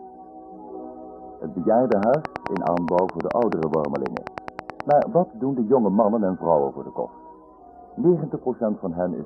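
A train of clicks runs from 1.92 to 5.03 s, most likely from electrical interference or a faulty connection or power supply, injecting short pulses into the signal at a steady 9.35 per second. Around thirty near-identical clicks land at even spacing, some reaching roughly 15 dB above the surrounding audio. They come through as a regular ticking or popping laid over the sound, audible through its quieter moments as well as its louder ones.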